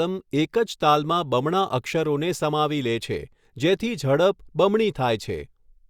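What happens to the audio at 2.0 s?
At 2.0 s the speech runs on intact, with no dropout, click, distortion or other fault at that moment.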